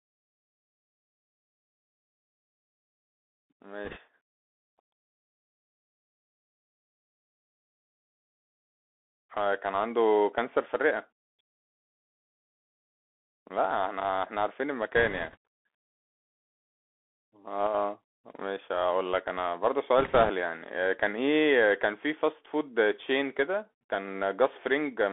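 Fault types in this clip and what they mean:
Bluetooth CVSD headset codec: speech squeezed through narrowband one-bit delta coding, so the band is roughly 300 Hz to 3.5 kHz, with scratchy sibilants and grainy hiss.
Bit errors on a Bluetooth voice link: corrupted bits on the headset link add a brief rushing crackle without sharp clicks, at 3.85, 14.96 and 19.98 s.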